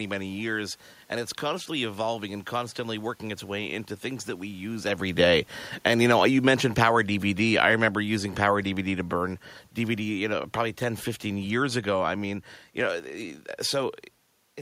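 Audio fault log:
5.06–12.27 s: automatic gain falling. After "things that we use", the gain control judged the input too loud or its background noise too strong and lowered it by about 9 dB over seven seconds. Speech and room noise sink together, so the whole sound fades, not just the talker.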